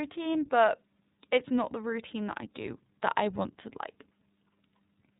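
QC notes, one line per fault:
Throughout, iLBC codec: the speech has nothing above 3.8 kHz and a plainly audible rough, synthetic edge. Each 30 ms frame's excitation is coded on its own, independent of the previous frame, and the sound fits iLBC's 30 ms mode at about 13 kbps.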